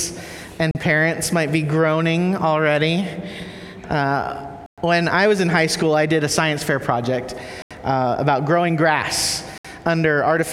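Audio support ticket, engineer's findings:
Four dropouts to dead silence at 0.71 s (38 ms), 4.66–4.78 s, 7.62–7.71 s and 9.58–9.65 s. Flat-line waveform gaps, full-height blank spectrogram columns. Likely Bluetooth stall: headset buffer drained while awaiting retransmissions.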